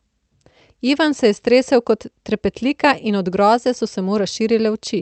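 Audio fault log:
No faults are heard anywhere in this speech clip. The sound has come over a WebRTC call path working as it should: the top of the spectrum ends near 8 kHz, and the coding texture fits an Opus stream at about 32 kbps.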